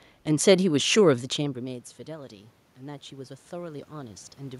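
From 1.37 to 4.33 s, automatic gain rising: the input fell by about 18 dB after the talker moved near 1 s, and the gain control slowly raised its gain by about 7 dB, so speech and room noise swell up together.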